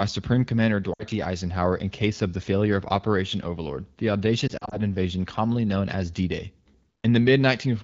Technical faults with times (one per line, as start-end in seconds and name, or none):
0.93-1.04 lost AMR speech frames
4.48-4.76 lost AMR speech frames